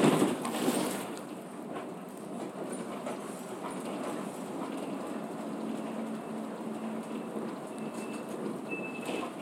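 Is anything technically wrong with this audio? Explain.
Yes. From 3.71 s to 8.59 s there is a doubled audio track. A second, full-band copy of the sound runs about a second behind the original and sits around 5 dB lower, so every event is heard again, fainter. The copy carries no decay or room colouring and cuts in and out abruptly at those two points. The likely cause is a second, slower capture path or an edit leaving two copies out of alignment.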